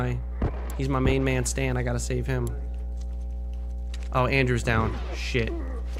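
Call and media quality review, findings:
Mains hum, present throughout. Probable ground loop in the capture chain, or a transformer near the input, coupling the 60 Hz power line into the signal. Result: a steady low 60 Hz tone with a few low harmonics, sitting only a few dB under the programme level.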